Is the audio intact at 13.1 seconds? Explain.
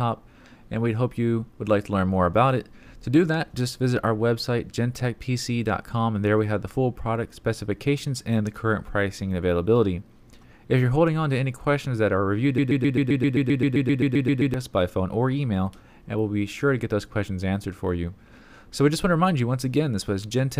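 No. At 13.1 seconds the audio is caught in a broken-record loop running from 12.58 to 14.54 s. A 131 ms fragment repeats exactly, back to back, 15 times, and whatever should have played over those two seconds is gone. The likely cause is a stalled player, encoder or stream that kept resending the last piece it held. Unlike an echo or reverb tail, the repeats don't decay or overlap. Each is an identical, full-level copy.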